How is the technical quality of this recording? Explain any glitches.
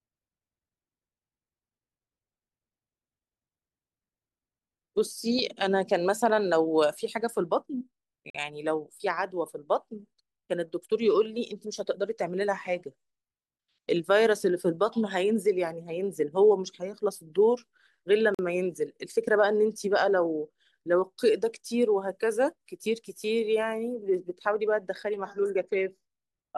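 The recording has two brief dropouts. Gaps between chunks occur at 8.30 s and 18.35 s: 44 ms silences, 10 s apart, where silence was left at the joins between chunks. Each appears as a hard-edged flat line in the waveform and a blank vertical stripe in the spectrogram.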